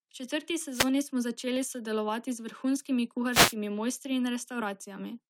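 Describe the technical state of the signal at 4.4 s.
At 4.4 s the speech signal is intact, with no fault present at that moment.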